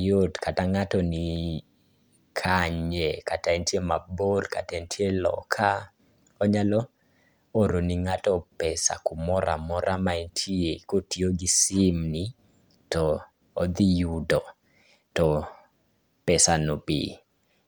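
No technical faults can be heard anywhere in the speech. Nothing in the recording points to a problem in how it was captured, processed or delivered.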